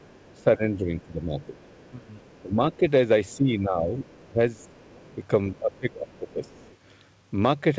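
A faint second voice sits under this speech recording at 0.0 to 0.43 s, 1.41 to 3.36 s, 4.04 to 5.13 s and 5.76 to 6.76 s. It runs about 35 dB below the main talker, rising to about 30 dB below in the 4.04 to 5.13 s stretch. This is the other side's voice leaking through, most likely because the talker's device played the far end on a loudspeaker and the echo canceller failed to strip that playback out of the microphone signal. Across 0.37 to 6.67 s the main talker also ducks in and out, falling by as much as roughly 15 dB. Those dips add up to around three seconds. That pattern is speech suppressed in double talk, probably caused by the canceller being unable to separate its own talker from the loudspeaker echo while both were active, so it turned down everything. The audio stops at 8 kHz, which fits the G.722 call codec it passed through.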